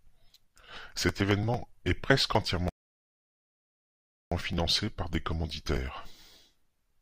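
Speech recording with a rebuffering stall from 2.69 to 4.32 s: playback starved of data and paused, adding about 1.6 s of flat, empty waveform before resuming seamlessly.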